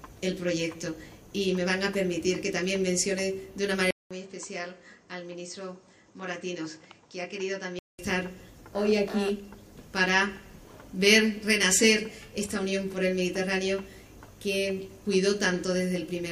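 From 3.91 to 7.99 s the sound drops roughly 10 dB quieter and turns dull, with nothing above 8.5 kHz and a faint new background hiss, after a 200 ms gap. This is likely an input switched to a poorer device, then switched back.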